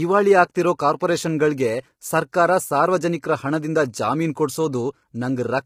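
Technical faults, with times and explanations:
Throughout: low-delay AAC compression. The speech sounds rough and grainy, with noise filling the gaps between harmonics and a thin, artificial top end. That's likely AAC-ELD at around 24 kbps, where short frames can't resolve pitch harmonics well and the bits run out fast.
2.32 s: pre-echo, a quick smear of hiss about 12 ms long just before "ಸಾರ್ವಜನಿಕ್ರ ಹಣದಿಂದ ಜಾಮೀನ್". The attack landed late in a transform block, so quantisation noise meant for the loud onset spilled into the quiet moment ahead of it, softening the attack.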